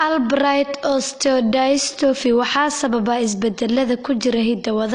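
Low-bitrate audio saved at a high bitrate affects the whole clip: the speech has nothing above 9.8 kHz and sounds dull and band-limited. The likely cause is an earlier low-bitrate encode, pointing to roughly 32 kbit/s AAC, whose losses a later high-bitrate MP3 pass cannot restore.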